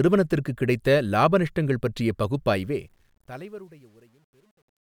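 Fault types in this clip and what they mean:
Truncation distortion on a fade: the speech fades out from about 2.5 s to the end, and the fade stage drops low-order bits without dither, a coarseness that fits about a 10-bit word length. As the level sinks toward the smallest step, the waveform collapses into a few square steps, so the tail turns gritty and buzzy. It is worst from 3.28 s to 4.85 s, at the quiet end.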